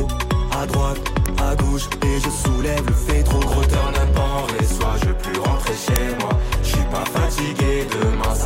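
At 1.26 s and 5.96 s, an uninitialised buffer cracks through. Leftover memory played as samples, about 0.73 ms and 2.9 ms long, fitting 32-sample and 128-sample buffers.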